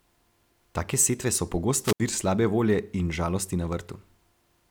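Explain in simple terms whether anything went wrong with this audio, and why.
Around 1.83 to 2.00 s there is a wireless microphone squelch dropout. The radio signal weakened, a little hiss rose, and the receiver muted the speech for about 72 ms.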